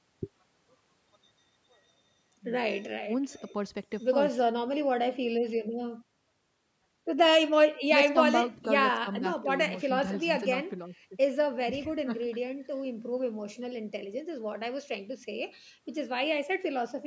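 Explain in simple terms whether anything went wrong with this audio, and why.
Nothing went wrong with this speech recording. It went through a call's microphone processing, which trims away the deepest bass and leaves nothing above 8 kHz, and that is normal for a call.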